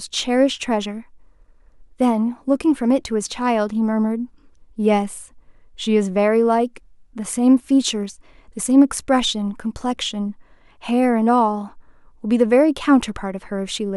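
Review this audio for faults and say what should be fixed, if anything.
Nothing here needs fixing, as I didn't hear any technical faults anywhere in the recording.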